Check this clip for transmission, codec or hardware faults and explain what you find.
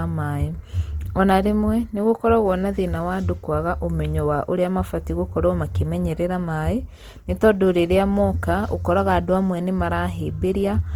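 Two faults are audible in this speech.

Opus compression, throughout: the grainy, rough, plainly noisy texture on the speech fits Opus in its CELT music mode at around 24 kbps. Starved bands are refilled with folded or noise content, so detail turns grainy rather than swirly. Content extends to about 20.2 kHz.

Clock drift buffer slips, from 1.43 s to 10.86 s: a click recurs every 1.57 s, about seven in all. Likely a clock mismatch of roughly 100 ppm between devices lets the buffer drift until a few samples are dropped or repeated.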